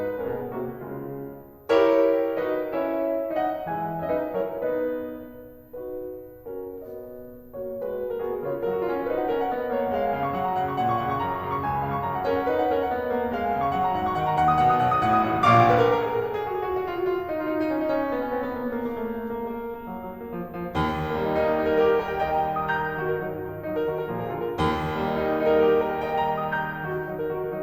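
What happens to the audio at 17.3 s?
A switching supply whistle is present at 17.3 s and runs through the whole clip: a power supply running in an audible burst mode or beating with another leaks a faint high tone wandering between 13.4 and 14.1 kHz, roughly 35 dB under the music.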